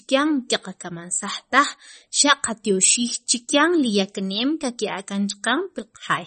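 Low-bitrate MP3 compression, likely around 33 kbps, cuts everything above 8.4 kHz and drops weak detail, leaving the speech dull, watery and swirly throughout.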